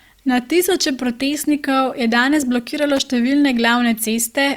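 At 2.97 s, lasting about 80 ms to 3.05 s, a loose connector crackle cuts into the speech. A worn or dirty contact is making and breaking as it moves. The signal is chopped on and off. It sounds like a short, irregular scratch of crackle.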